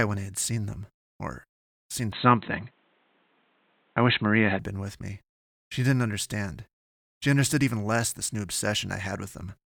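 Speech that turns dull and band-limited from 2.12 to 4.59 s, losing everything above 4.1 kHz, shifting somewhat in level with faint new hiss, most likely an input switched to a poorer device.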